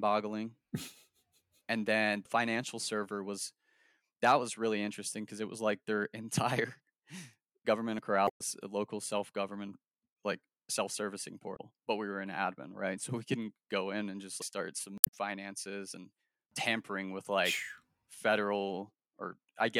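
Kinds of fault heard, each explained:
Dropped buffer (overrun): a sudden skip ahead with no gap, likely unread samples overwritten, losing about 70 ms between "and then" and "financial server".
Damaged data in a compressed stream: the decoder misreads frames and resyncs, giving glitches near 8.2, 11.5 and 15.0 s.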